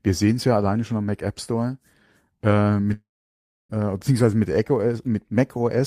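At 2.93 s the speech breaks off. The last sound is briefly stretched into a fading buzz that dies away within roughly a tenth of a second, leaving about 0.64 s of silence. Speech resumes at 3.71 s on "beziehungsweise mit", with about 0.76 s of material simply gone rather than delayed. This is likely a long network dropout: packets stopped arriving, the receiver concealed the gap by extending and fading the last sound, then fell silent until the stream returned.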